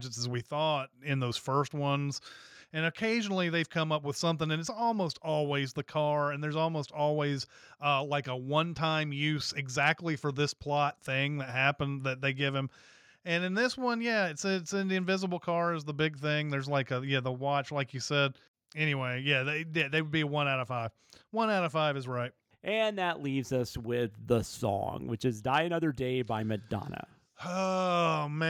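No technical faults turn up anywhere in this speech recording, so there is nothing to describe in time order.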